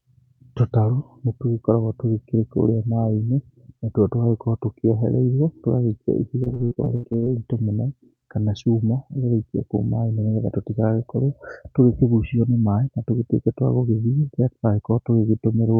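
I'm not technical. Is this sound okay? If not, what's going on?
No. Repeated packet loss (robotic sound) from 6.43 to 7.28 s: chunks of audio went missing and were patched by stretching earlier sound, so the speech turns choppy and robotic.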